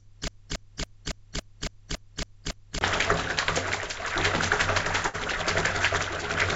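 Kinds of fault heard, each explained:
Broken-record loop: One fragment of about 279 ms repeats exactly, back to back, nine times. It is already looping when the clip begins and stops at 2.81 s. A stalled player or stream likely kept resending its last piece, so the audio meant for that time is lost.
Burst of packet loss: Audio drops out briefly from 5.08 to 5.16 s. The receiver stretches the last sound for about 56 ms, fading it down, then resumes further on. About 60 ms of audio is skipped, heard through an 8 kHz-limited call-codec band.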